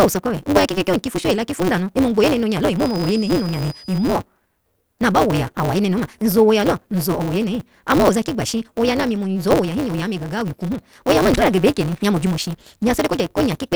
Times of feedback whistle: 2.75-4.18

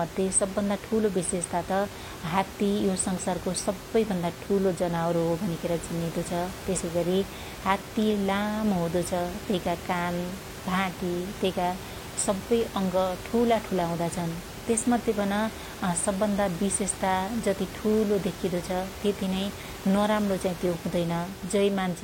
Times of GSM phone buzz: none

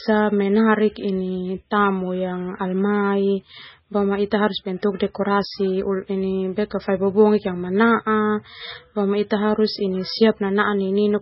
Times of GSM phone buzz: none

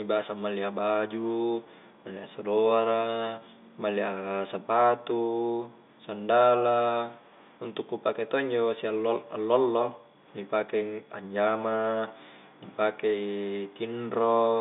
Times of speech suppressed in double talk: none

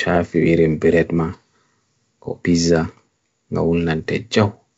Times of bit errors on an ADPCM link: 3.99-4.09

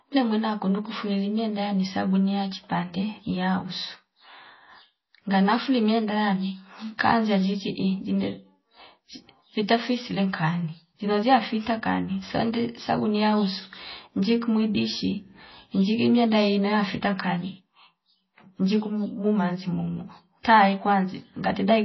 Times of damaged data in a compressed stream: none

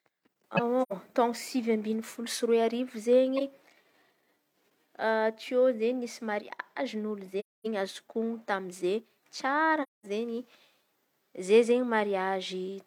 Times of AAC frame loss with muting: 0.82-0.92, 7.39-7.67, 9.82-10.06

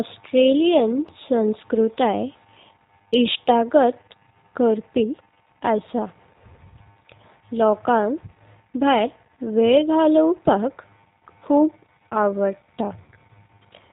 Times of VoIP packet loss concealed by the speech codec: 13.04-13.10

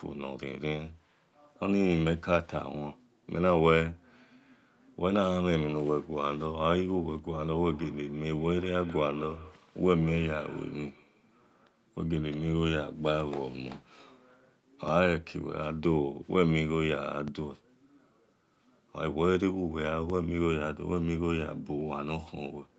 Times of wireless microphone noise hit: none

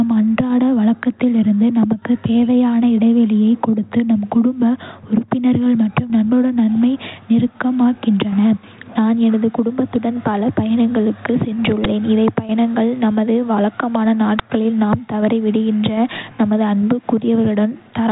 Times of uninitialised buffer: 11.84, 14.39

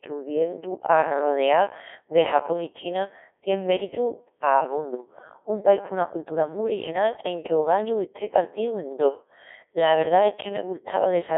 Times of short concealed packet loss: none

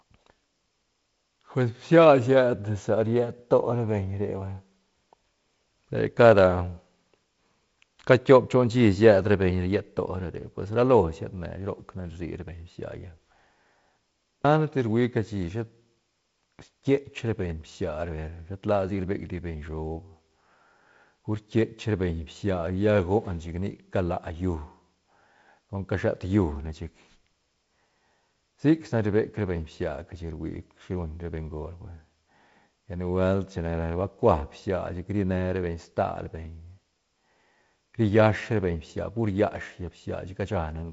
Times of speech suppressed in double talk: none

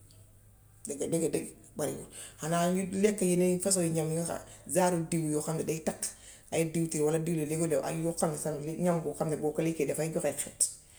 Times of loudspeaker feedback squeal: none

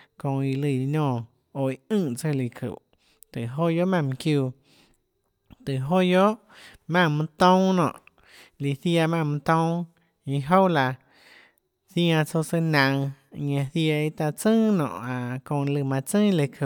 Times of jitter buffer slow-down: none

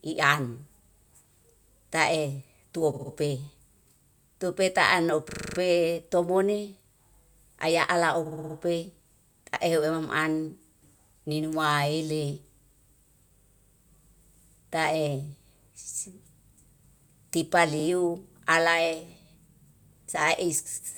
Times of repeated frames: 2.93-3.11, 5.29-5.58, 8.25-8.55, 13.37-13.73, 17.79-17.84

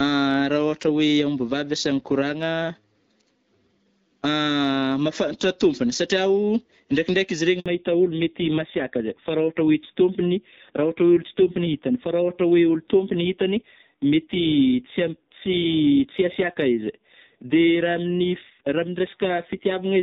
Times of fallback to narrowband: 7.66-20.02

